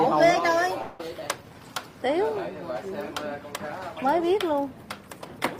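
An audio clip with one long network dropout from 0.81 to 1.00 s: 200 ms of sound is lost, masked by a 180 ms fading fill, likely from packet loss before resuming.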